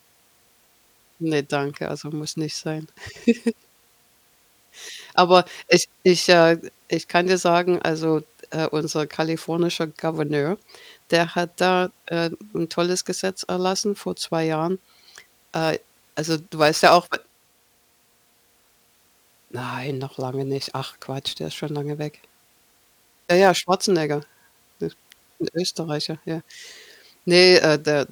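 From 15.55 s to 23.55 s the speech picks up a gritty, fizzy buzz that rides on the louder and brighter syllables. That's crude rate conversion: the sample rate was changed by just picking the nearest sample, with no filtering, and the pattern fits a 48 kHz to 44.1 kHz drop. The repeating timing error creates inharmonic tones that don't belong to the voice, sitting only about 25 dB under it.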